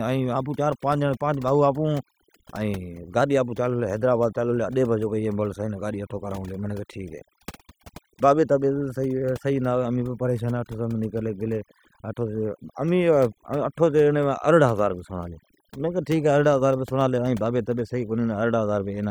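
Overdone noise removal runs throughout: frequency bands near the noise floor are gated away, leaving near-silent gaps with twinkling specks, and a spectrogram speckled with isolated bright dots between harmonics.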